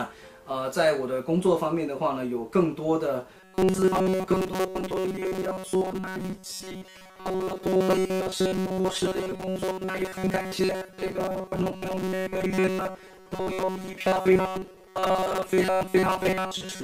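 From 3.37 s to the end, the audio takes on robotic sound from repeated short buffers: a rigid, metallic buzz pitched at 188 Hz replaces the natural tone while still roughly tracking the original contour. The likely cause is audio arriving too slowly, so playback keeps looping a fragment of about 5.3 ms, matching that 188 Hz pitch, in place of the skipped material. Roughly seven tenths of the affected stretch is filled this way.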